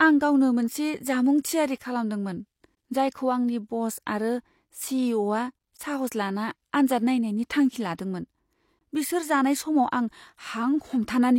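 At 2.75 to 2.77 s, just after "थियारि खालामदोंमोन", comes the first gap between chunks: a 20 ms hole where delivery of 3 s chunks paused. It repeats at 5.77 to 5.79 s. On a waveform each shows as a brief flat dropout; a spectrogram shows a thin vertical blank band.

At 7.97 s, after "आन्जाद नायनायनि थांखि", pre-echo smears a sharp onset. Codec noise spreads about 16 ms ahead of the attack, visible as a broadband smudge just before the onset on a spectrogram.

The last 20 ms gap falls at 8.79 to 8.81 s, before "बिसोर जानाय".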